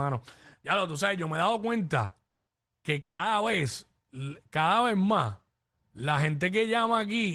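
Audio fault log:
2.05–2.14 s, burst of packet loss: the speech briefly turns into a held buzz or hiss, about 60 ms long, that fades before the voice picks up again with a small jump. A short run of packets never arrived in time, so the receiver stretched the last sound it had and turned it down. When audio resumes, roughly 60 ms of speech has been skipped rather than delayed.
2.29–2.50 s and 3.01–3.22 s, long network dropout: each time the voice drops to silence before returning, in the second gap after a brief fading buzz, with the quiet part lasting about 180 ms in the first gap and about 160 ms in the second. These are likely dropouts where no audio reached the receiver for a sustained stretch. In the second gap concealment held the last sound briefly, then gave up, and around 180 ms of speech is missing from each gap.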